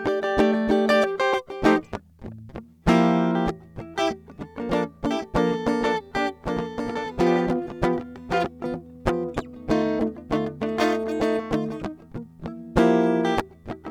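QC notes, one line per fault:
5.11 to 8.45 s, doubled audio track: the music gains a dry, full-band second copy trailing about a second behind and roughly 5 dB quieter, starting and stopping abruptly with no decay. This is likely a slower second capture path or an edit holding two misaligned copies.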